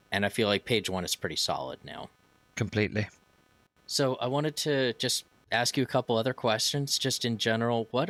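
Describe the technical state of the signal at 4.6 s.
At 4.6 s the speech carries computer activity noise, present throughout the clip: a faint scratchy buzz, pulsing a few hundred times per second and well below the voice. Processor or graphics load is shaking the shared audio ground. Unlike steady mains hum, it rises and falls with computer activity.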